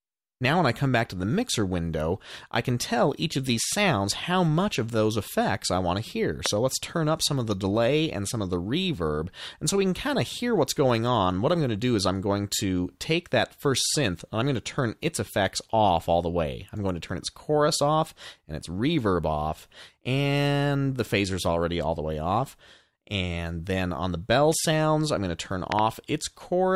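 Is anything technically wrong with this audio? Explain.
Yes, there are two loud pops. The first, from 6.46 to 6.48 s, is a single pop. The second, from 25.72 to 25.81 s, is a double pop. Both hit about 20 dB above the sound, which carries on underneath. These are likely sudden voltage spikes from a plug, switch or static.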